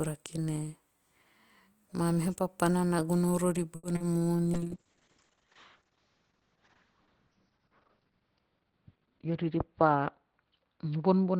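A short stall from a late packet hits this speech recording at 3.75 to 3.85 s, just after "papana na gono rori": the jitter buffer ran dry, so the receiver held the last sound for 80 ms until the packet arrived, then resumed with nothing lost but 80 ms more delay. Short concealed packet loss follows at 3.95 to 3.98 s and 3.98 to 4.02 s, where 20 ms and then 40 ms of audio never reached the decoder and the receiver bridged each gap by extending the preceding sound, leaving a brief smear or wobble and trimming the delay by about 20 ms. A call bitrate drop starts at 4.54 s and runs to the end, as the encoder falls from 32 to 7 kbps and the audio bandwidth narrows from 20 kHz to 6 kHz, making the sound rough and muffled, with the lowest rate lasting about 3.9 s. A jitter buffer speed-up from 9.08 to 9.58 s plays the audio at 110% speed while keeping the same pitch, cutting roughly 50 ms by repeatedly dropping pitch-period-sized slices, so that stretch sounds hurried.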